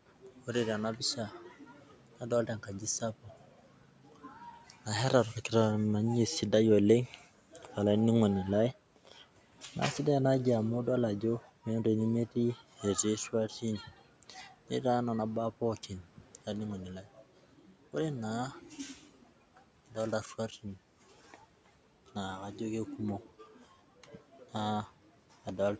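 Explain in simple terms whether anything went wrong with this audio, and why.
Speech cut by the noise suppressor happens in six places: 0.22 to 5.5 s, 7.07 to 7.77 s just before "olaininingoni lai", 8.96 to 9.76 s just after it, 11.4 to 14.71 s, 15.77 to 22.16 s, and 23.22 to 24.54 s. The call's noise filter mistook quiet parts of the speech for background noise and turned them down along with it. Soft sounds and word endings come out faint or swallowed, most heavily over about two seconds of the opening stretch.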